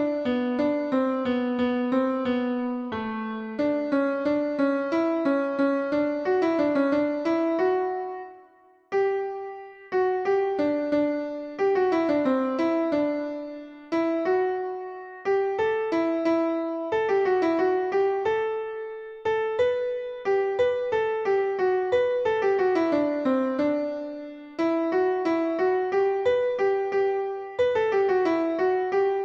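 No technical faults are audible.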